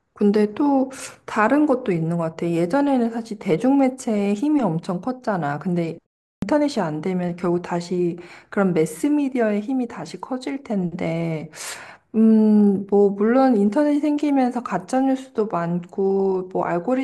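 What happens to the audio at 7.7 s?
Nothing goes wrong at 7.7 s: the speech runs through that moment intact, with no dropout, glitch or distortion.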